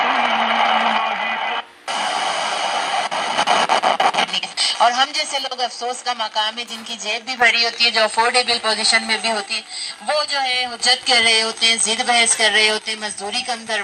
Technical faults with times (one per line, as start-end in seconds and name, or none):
0.98-3.38 one channel drops out
5.05-7.42 one channel drops out
9.46-10.80 one channel drops out
12.79-13.83 one channel drops out